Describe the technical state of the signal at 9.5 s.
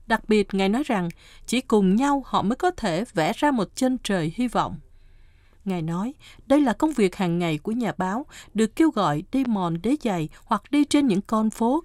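A single loud pop sits at 9.45 to 9.48 s, a few decibels above the speech, which carries on underneath. It is likely a brief voltage spike from a plug, switch or static, and shows as a narrow spike on the waveform and a thin full-band vertical stripe on the spectrogram.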